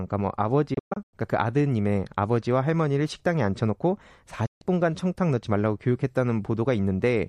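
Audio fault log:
0.74–1.14 s, digital broadcast dropout: the speech breaks up into several short muted holes spread over about 0.38 s, the longest about 120 ms, with about 264 ms missing in total. Each gap fades down and back in about 8 ms, so it sounds like quick dips to silence, not clicks. The receiver muted on bad frames, which fits losing 24 ms frames in bursts.
4.46–4.62 s, digital broadcast dropout: one clean hole of about 144 ms, again with 8 ms fades.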